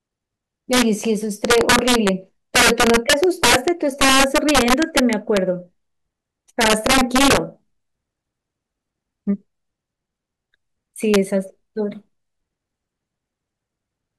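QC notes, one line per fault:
0.73–0.82, 1.45–2.09, 2.56–5.37, 6.61–7.37 and 11.14 s: integer overflow. Loud speech peaks, pushed about 4 to 8 dB past full scale and barely reaching it at 11.14 s, wrap to the opposite sign instead of limiting, giving violent cracks far harsher than clipping, worst across 2.56–5.37 s.
1.01 and 9.56 s: repeated buffer. A 5.8 ms slice, which fits a 256-sample buffer, replays once at 1.01 s and twice at 9.56 s when fresh audio arrives late. Nothing is skipped, but the hard joins make brief clicks or buzzes.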